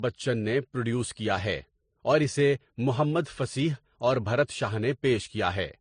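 Throughout, the speech carries transcoding between lossy codecs, likely AAC then MP3: layered, swirly artefacts stack together, and the spectrogram is blank above 9.8 kHz.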